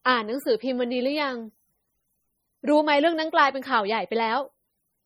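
From the first moment to the last, the speech has a watery, swirly quality, with s sounds coming through as metallic chirps. That's heavy damage from what's likely MP3 compression at a low bitrate, something around 32 kbps. Starved of bits, the encoder lets weak frequency lines blink on and off between frames, and the attacks smear.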